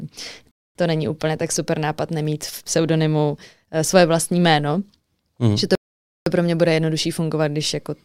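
The player twice runs out of downloaded audio and halts until more data arrives, a rebuffering stall each time. From 0.51 to 0.75 s the speech drops to silence for about 0.24 s, then picks up exactly where it left off with "to není úplně tak". A longer stall from 5.75 to 6.26 s inserts about 0.51 s of silence. Nothing is skipped; the gaps only add time and break the flow.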